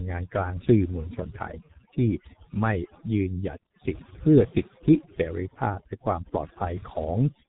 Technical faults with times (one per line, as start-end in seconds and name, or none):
0.00-7.48 overdone noise removal
0.00-7.48 G.723.1 codec